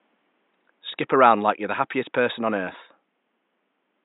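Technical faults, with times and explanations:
Nothing stood out on listening to the speech, and the faint room noise sits about 51 dB below it.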